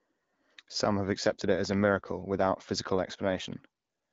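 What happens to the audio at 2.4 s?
Nothing goes wrong at 2.4 s: the speech carries on intact through that moment, coded by the AMR wideband (HD Voice) codec at 12.65 kbit/s.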